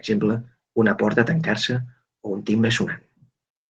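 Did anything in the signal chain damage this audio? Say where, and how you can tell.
No, nothing in the chain audibly damaged this speech.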